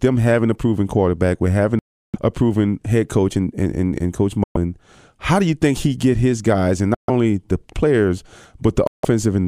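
The speech drops to silence four times, at 1.79 to 2.16 s (about 0.35 s), 4.44 to 4.57 s, 6.95 to 7.10 s and 8.87 to 9.05 s, then picks up further along as though it had kept running. These are likely Bluetooth dropouts, where packets reached the headphones too late and were discarded.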